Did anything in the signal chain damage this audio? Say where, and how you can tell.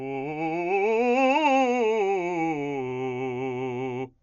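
Yes. Dolby Digital compression damage runs through the whole music clip, at the codec stage. Nothing sounds above 7 kHz, and tones carry a rough, fluttering noise, which points to a very low bitrate near 48 kbps, likely from an encoder starving frequency lines and filling them with dither.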